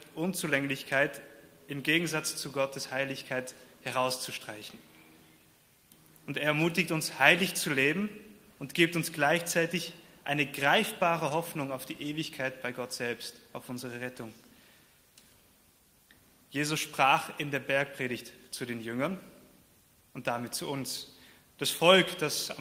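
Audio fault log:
No faults are audible in this recording; the signal holds steady with nothing breaking its continuity at any point.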